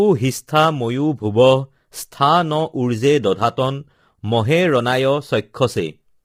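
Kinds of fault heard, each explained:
Low-delay AAC compression: the speech was likely encoded with AAC-ELD, the short-frame codec of video calls, and its heavy damage fits a rate near 24 kbps. At so low a bitrate, voices turn rough and grainy, with noise filling between harmonics.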